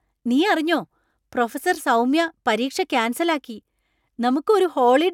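No technical faults can be heard at any point in the recording.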